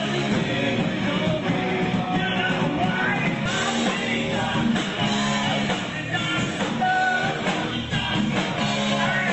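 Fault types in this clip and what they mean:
Skip ahead: At 3.45 s, roughly a second of queued sound is dropped. Playback jumps forward with no gap, the two sides spliced almost directly.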